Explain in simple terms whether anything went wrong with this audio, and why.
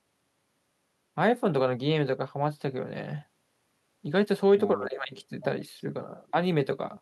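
Nothing went wrong here.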